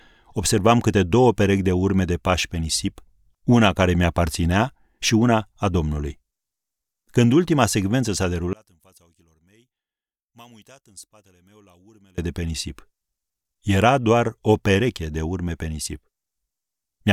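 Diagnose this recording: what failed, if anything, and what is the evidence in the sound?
From 8.53 to 12.18 s, just before "de pe nisip", the speech drops about 30 dB to a faint residue: likely one channel inverted in the wiring, cancelling when summed to mono.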